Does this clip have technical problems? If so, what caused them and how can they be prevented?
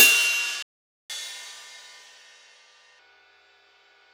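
Yes. There is a playback stall from 0.63 s to 1.10 s. The sound cuts out mid-flow and leaves about 470 ms of silence. It then resumes from where it stopped. The player was likely starved of data, or its audio thread was blocked, so nothing reached the output until it recovered. To prevent it, use a larger playback buffer and give the audio thread higher priority.

Catch-up at higher speed follows, from 1.10 s to 2.99 s. The player works through its backlog by resampling at 1.25 times normal speed. Everything plays faster and sounds raised by about four semitones. At 2.99 s speed and pitch snap back to normal. To prevent it, have the player absorb the delay with a time-stretch that keeps pitch, or simply accept the added delay.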